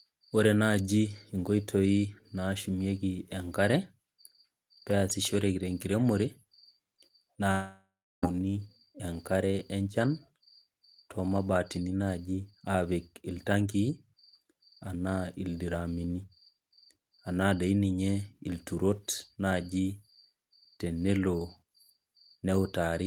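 From 7.51 to 8.25 s, a long network dropout likely cut off incoming audio; the last sound fades into buzz, then silence, losing 0.72 s.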